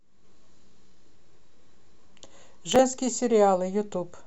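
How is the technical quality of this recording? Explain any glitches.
The recording has one glitch, a short burst of processor overload crackle. From 2.43 to 2.79 s the processor fell behind and repeatedly missed its deadlines for small buffers of around 5 ms, about seven of them. Each missed buffer was skipped outright, leaving hard-edged gaps that together sound like a gritty, tearing crackle over the speech until the load eases.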